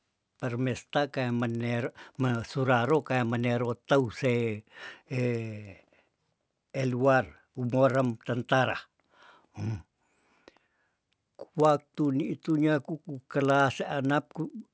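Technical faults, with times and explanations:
Throughout: resampler restarted on every block. Converting 48 kHz to 16 kHz in isolated 50 ms blocks left each block edge without its true neighbouring samples, so a small error lands every 50 ms. The speech carries a steady 20 Hz ticking that stops in pauses.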